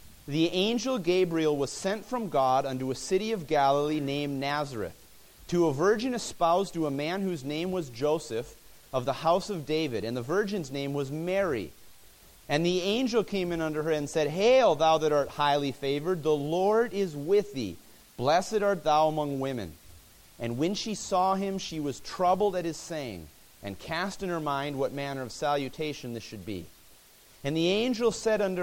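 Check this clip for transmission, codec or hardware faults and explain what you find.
Nothing turned up here worth flagging; the audio holds together with no transmission, codec or hardware trouble to report.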